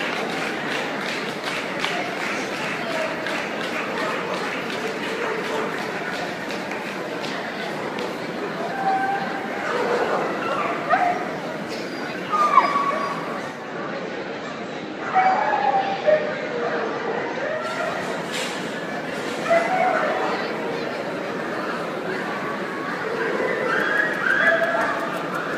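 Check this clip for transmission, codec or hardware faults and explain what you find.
One fault: digital radio blending to analogue, from 13.38 s to 17.86 s. The receiver lost its digital stream and cross-faded over about 0.44 s to the station's FM broadcast, then back. Level drops about 1 dB and hiss sits well below the signal. Unlike a dropout or codec glitch, the audio never breaks. The FM noise fades in and out with each blend.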